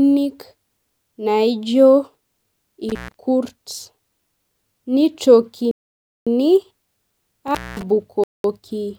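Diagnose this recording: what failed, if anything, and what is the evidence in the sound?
Intermittent contact in the analogue wiring: the sound cuts out at 2.89 to 3.14 s and 7.48 to 7.83 s, open for 132 ms and 221 ms. There is crackle at the edges and faint hiss underneath, unlike a clean digital gap.

Playback buffer: there are dead silences of 553 ms at 5.71 s and 206 ms at 8.24 s, with no crackle or hiss, before the speech resumes. This is likely a Bluetooth stall, with the headphone buffer running dry.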